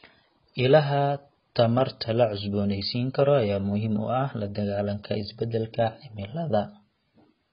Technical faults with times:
0.00-7.52 AAC compression

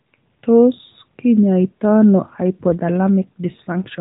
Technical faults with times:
none

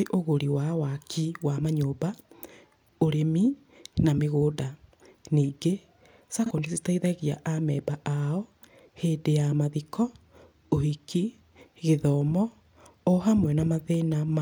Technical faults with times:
6.46-6.51 AAC frame loss with concealment

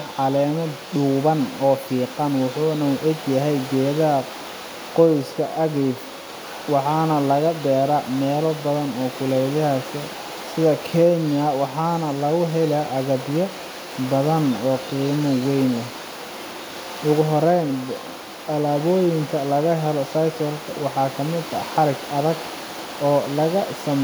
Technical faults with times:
none

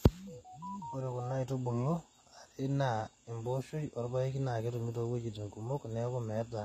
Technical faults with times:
0.00-6.64 HE-AAC compression

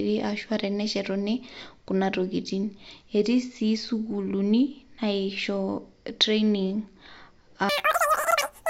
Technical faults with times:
7.69-8.69 wrong sample rate

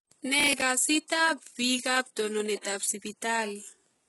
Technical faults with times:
0.00-4.08 HE-AAC compression
0.39-0.62 processor overload crackle
2.61 pre-echo

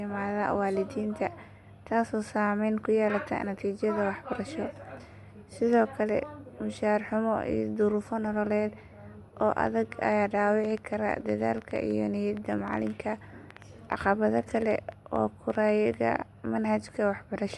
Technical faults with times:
0.00-17.58 Bluetooth LC3 compression
9.67-15.95 train of clicks

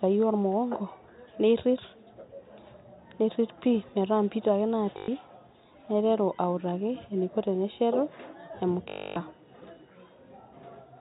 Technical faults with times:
4.98-5.08 packet loss with last packet repeated
8.90-9.16 packet loss with last packet repeated

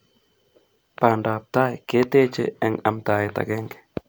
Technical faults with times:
none

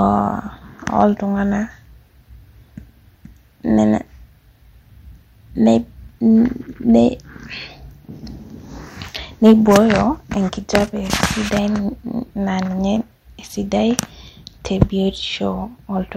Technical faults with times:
1.00-1.03 hard clipping
9.45-9.90 hard clipping
14.82 hard clipping

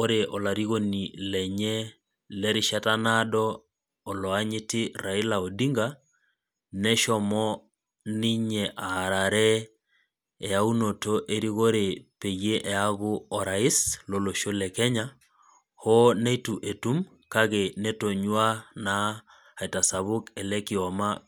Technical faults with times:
none

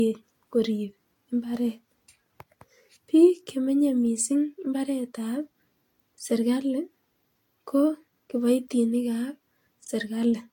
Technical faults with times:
0.00-10.53 generation loss

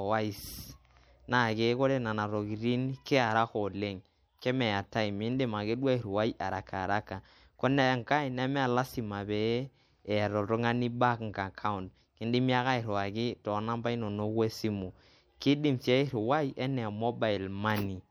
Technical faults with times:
0.00-18.11 MP3 compression

